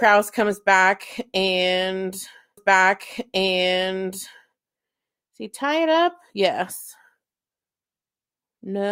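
At 2.57 s a stream segment is repeated. The player queued the same two-second chunk twice. So the speech jumps back and replays until 4.57 s. A small blip marks the jump. The repeat adds 2 s to the programme.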